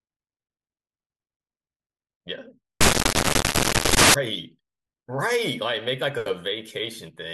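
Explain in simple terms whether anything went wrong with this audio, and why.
From 2.81 to 4.14 s, the program reading this speech recording put each sample together from the wrong bytes, so the tiny, fast-changing details became the main part of the sound. That stretch turns into a loud, harsh noise.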